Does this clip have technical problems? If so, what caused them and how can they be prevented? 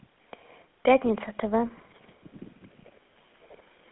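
Yes. Throughout, GSM full-rate codec damage gives speech a buzzy, gravelly roughness within a 250 Hz to 3.6 kHz band, beyond plain telephone band-limiting, fitting a 13 kbps pulse-excited coder. Prevent it by recording directly or using a wideband codec.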